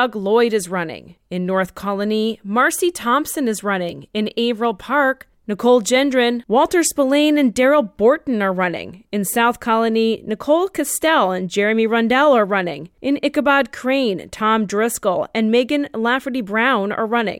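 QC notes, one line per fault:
2.79 s, 3.89 s, 9.94 s, bit error spike: each is a single sharp tick, broadband and unrelated to the speech around it, peaking at about -20 dBFS for the first two and about -32 dBFS for the last. A flipped bit in memory or on a digital link threw one sample (two in a row at 3.89 s) off by a power of two before the next sample returned to normal, and that instant jump and return is what makes the click.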